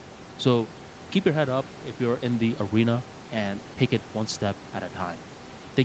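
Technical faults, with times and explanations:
Nothing stood out on listening to this speech recording; the room noise sits about 20 dB below the speech, and the call path's top end stops near 8 kHz, as expected for this kind of call.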